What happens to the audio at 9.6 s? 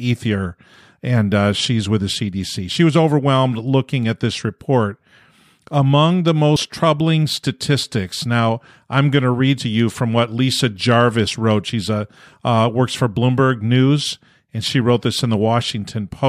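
Compressed frames are skipped at 9.6 s. The decoder drops whole frames and jumps ahead by roughly 50 ms, which fits two lost frames of 23.2 ms each. Because adjacent frames overlap, the jump comes out as a brief smeared blip rather than a hard click.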